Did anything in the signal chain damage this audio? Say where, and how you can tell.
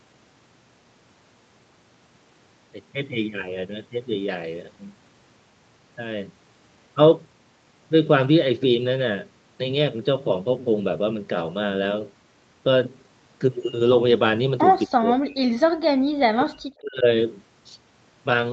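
Yes. Speech is suppressed in double talk, likely because the call's echo canceller mistook overlapping talk for echo. The level drops by around 40 dB from 14.86 to 15.56 s and from 16.16 to 17.05 s.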